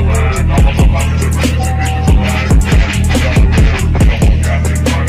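A call bitrate drop runs from 0.63 s to 4.05 s. The call's bandwidth estimate fell, and the encoder was pushed from a rate that fits around 96 kbps down to roughly 20 kbps. It then codes the audio far more coarsely and trims away its upper frequencies, so the sound turns rough, watery and muffled. The worst stretch holds for about 1.4 s before the bitrate climbs back and clarity returns.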